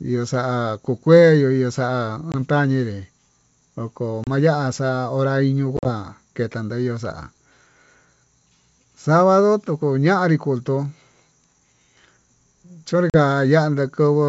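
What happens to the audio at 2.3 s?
Right after "kuu kueyuu ihu xa'a", the speech drops into a hard-edged silent hole of about 20 ms, from 2.32 to 2.35 s, then comes back with brief, slight distortion before settling. This is packet loss on an ADPCM call, with a couple of packets lost. The G.722 decoder's adaptive predictor and step size drift from the sender's and need some tens of milliseconds to resynchronise.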